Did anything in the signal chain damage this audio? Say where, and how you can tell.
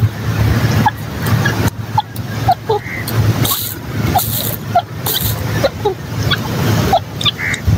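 Yes. There's gain pumping all the way through. The gain swings by roughly 20 dB, so loud and quiet passages sit squashed close together. That points to the input gain being set far too high, likely at the preamp stage, with a fast limiter or compressor downstream clamping hard on each peak and releasing in the pauses.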